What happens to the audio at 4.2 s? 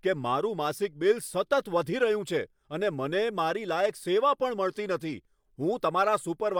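At 4.2 s the speech carries on intact, with no dropout, click, distortion or other fault at that point.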